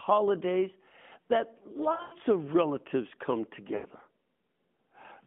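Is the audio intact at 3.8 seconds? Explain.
No. From about 3.76 to 3.86 s, just after "of relatives come", the clip has lost AMR speech frames. Roughly 80 ms of speech failed its checksum, which fits four 20 ms frames. The narrowband decoder filled the gap by repeating the last good pitch and vocal tract settings at falling gain. The speech there sounds smeared and drawn out, sagging toward silence before it returns weak or rough for a moment.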